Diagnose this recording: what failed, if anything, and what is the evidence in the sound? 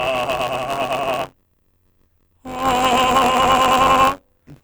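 Buffer tearing runs through the whole music clip, a failure at the driver or buffer stage. A steady robotic rattle near 94 Hz sits on the music wherever there is signal, which fits a 512-sample buffer. The writing program and the hardware reading the ring buffer have drifted so they cross inside every period. Roughly a tenth of each buffer replays audio from about 20 ms earlier, spliced in with abrupt joins at both edges, producing the periodic buzz.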